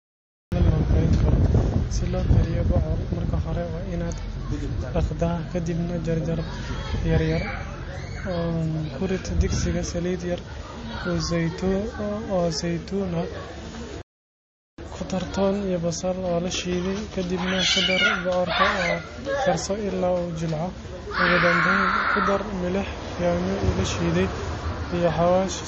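The clip opens with digital silence until 0.52 s, when the speech begins abruptly in the middle of a sound, with no natural attack or fade-in and a hard edge at the entry point. This is a cut-off start: capture or streaming began late, so the first thing heard is a fragment of a sound already under way rather than its beginning.

Throughout the recording the speech sounds dull. Nothing is present above 8 kHz, and the speech carries the artefacts of a heavily compressed MP3. This is low-bitrate audio saved at a high bitrate. It fits a 32 kbit/s MP3 that was likely re-encoded at around 192 kbit/s. The larger file cannot restore what the first encoding stripped out, so the cut-off and artefacts remain.

From 14.02 s to 14.78 s the speech stops dead mid-flow for about 0.77 s of silence, then continues. This is a playback stall. The player most likely ran out of data or had its processing thread blocked, so the output went silent until it recovered. 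The sudden gap sounds like a hiccup rather than a natural pause.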